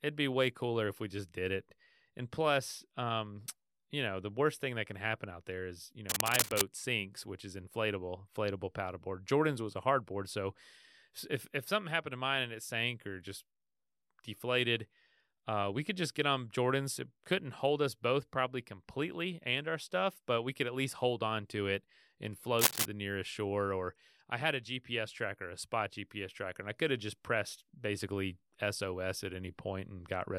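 Two bursts of cable scratch noise break into the speech. The first runs from 6.09 to 6.74 s, between "out there is you" and "sinks which is inflatable", at roughly the speech's own level. The second, from 22.59 to 22.86 s, after "on to it and" and before "the nearest shore", sits somewhat above the speech. Both sound like a harsh scraping rustle. The likely cause is a worn lead or connector being moved, so its contact resistance jumps around. On a spectrogram each shows as a ragged, broadband smear, and the waveform carries dense, jagged spikes over the speech envelope.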